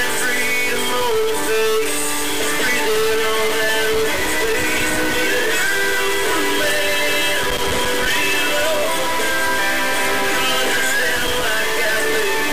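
The audio carries a harsh, buzzy distortion from start to finish that rides on the waveform rather than sitting apart from it, and the quiet stretches are filled with a gritty noise floor instead of falling silent. That combination points to a stuck bit, likely a fairly high-order bit in the converter or data path held at a fixed value, so that roughly half the samples are displaced by a large, constant step, about -15 dBFS. Three separate bursts of irregular crackle and scratching, from 3.92 to 5.16 s, from 7.44 to 8.06 s and from 11.16 to 11.43 s, are loose connector crackle. A worn or dirty contact is making and breaking intermittently, chopping the signal into fragments and adding pops wherever there is a DC offset on the line. Because the contact's behaviour depends on movement, the bursts vary in length, from just over a second down to about a quarter of a second.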